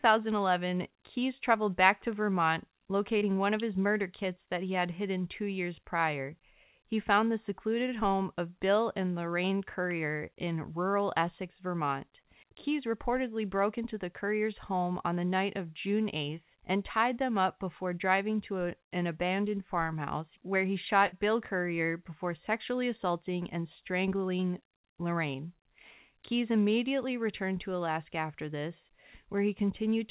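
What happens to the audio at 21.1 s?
From 21.07 to 21.14 s the last sound is held and fades for about 50 ms, then the audio jumps ahead, skipping roughly 60 ms: a burst of packet loss concealed by the receiver.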